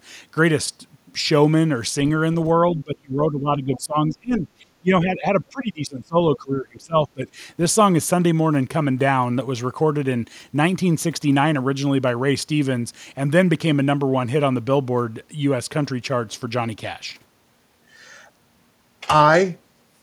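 From 2.75 to 6.18 s there is speech suppressed in double talk. The likely cause is that both ends spoke at once and the echo canceller, unable to tell the local talker from loudspeaker echo, pulled down everything in the microphone path. For about three seconds of that span the voice sinks, at its deepest by around 25 dB.

Within that stretch, from 3.74 to 3.80 s, the other side's voice is leaking through. The likely cause is echo of the far end from this device's loudspeaker that the canceller did not fully remove. It is a faint scrap roughly 25 dB under the speech, a brief trace of a second voice.

The double-talk suppression returns from 6.36 to 7.4 s. The canceller is likely clamping down on overlapping talk again, and for around 0.7 s in total the speech dips, reaching a similar depth of about 25 dB.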